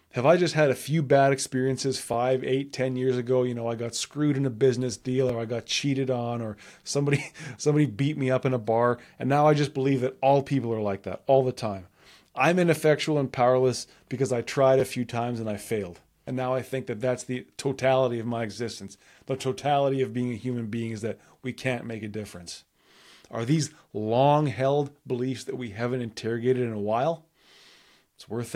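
It's a speech clip with two repeated buffers, at 5.29 s and 14.80 s. Each time, new audio arrived late, so the same 11.6 ms chunk played twice with a hard join, which fits a 512-sample buffer. At that size it comes across as a click or brief buzz rather than a stutter, and nothing is skipped.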